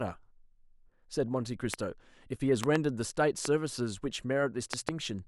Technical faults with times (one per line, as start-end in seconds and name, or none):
1.74-1.76 loud pop
2.64-2.78 loud pop
3.45-3.47 loud pop
4.73-4.91 loud pop